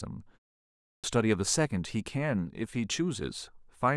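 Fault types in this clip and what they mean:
Clipped start after a pause: after a silence of about 0.49 s, the output path has evidently drifted into an idle state and must wake before passing audio again, so the first 247 ms of the returning speech, from 0.79 to 1.04 s, never reach the output. The speech bursts in mid-sound, its onset missing. On a waveform the trace jumps straight from flat to speech with no build-up. A spectrogram shows energy appearing as an abrupt vertical edge.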